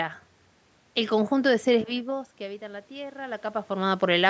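At 2.06 s the speech drops by about 17 dB as the talker moves back. Automatic gain rising follows. The gain control slowly adds about 4 dB until 3.97 s. Voice and room noise swell together over almost two seconds.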